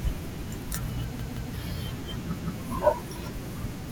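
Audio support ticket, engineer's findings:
Repeated buffer, speech stutter at 1.20–1.54 s. A 171 ms piece plays three times with hard joins, which fits an 8192-sample buffer. Playback underrun. About 300 ms lost. Again at 2.39–2.56 s, played twice, about 150 ms lost.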